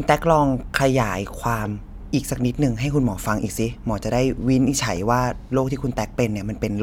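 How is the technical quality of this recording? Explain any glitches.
Listening to the speech carefully, nothing in the recording stood out as a technical problem, so there are no glitches to explain.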